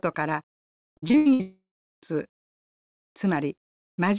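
From 0.9 to 1.41 s the speech turns choppy, with a robotic, stuttering quality and pieces audibly missing. This is repeated packet loss. Six short gaps land close together, the longest about 80 ms, and each is patched by stretching the last bit of sound before the next hole arrives. Nearly half of that half-second stretch is patched-in material rather than real speech.

Right after, from 1.41 to 2.03 s, the sound smears into a fading buzz, then drops to silence for roughly 0.4 s before speech resumes with a piece gone. This points to a long network dropout, likely the cause. About 0.6 s of audio never arrived, and the receiver extended the last sound until the continuation died away. Across the clip the narrow telephone-band sound, with nothing above 4 kHz, fits a G.711 call path at 64 kbps.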